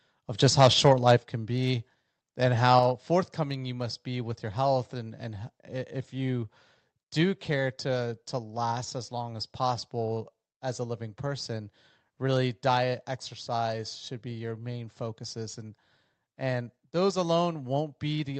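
Speech recording with microphone overload from 0.61 to 1.12 s, between "of just" and "can be and". The peaks run about 5 dB past the converter's limit and around one percent of samples are flattened, which likely means the input gain was set too high. On a waveform this shows as squared-off tops, and on a spectrogram as broadband smearing. Two abrupt microphone volume steps down follow, at 1.17 s (about 6 dB) and at 2.79 s (about 4 dB, just before "forthcoming you must be"). The likely cause is the call software lowering the input level, and each step appears as a sudden drop in waveform envelope height. Above all this, the call path's limit near 8 kHz is visible as a sharp spectral ceiling.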